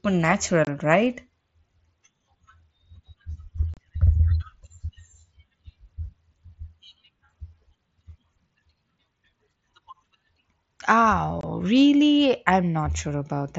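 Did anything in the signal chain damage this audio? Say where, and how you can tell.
Yes, on the Bluetooth headset link: unconcealed Bluetooth headset packet loss. The speech cuts out with abrupt edges at 0.65, 3.74 and 11.41 s, leaving holes of about 22 to 30 ms. That fits three or four voice frames lost between headset and phone and filled with silence or an idle pattern, not concealed.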